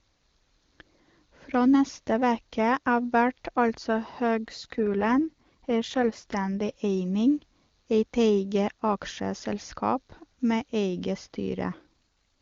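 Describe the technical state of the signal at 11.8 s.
An AMR rate drop covers 11.8 s, running from 11.62 to 11.86 s, just after "med eige". The network has pushed the wideband AMR codec down to a lower mode, spending bits on error protection rather than on the speech. The bandwidth stays the same and there is no gap, but the speech turns rougher and more synthetic for that quarter second. This fits a step down from 23.85 to about 8.85 kbit/s.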